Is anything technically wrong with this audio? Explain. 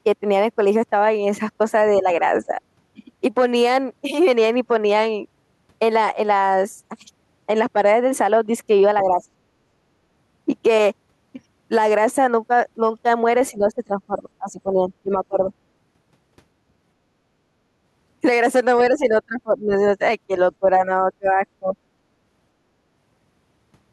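Yes. The speech dips and partly drops out at 2.02–2.06, 2.46–2.52, 9.03–9.22, 13.51–15.52, 18.95–19.82, 20.6–21.43 and 21.59–21.76 s. The brief early dips are shallow, about 5 to 10 dB, while the later ones sink roughly 20 to 25 dB and break up over stretches approaching a second and a half. This is likely speech suppressed in double talk: the echo canceller couldn't tell the talker from the far side's loudspeaker echo and attenuated both.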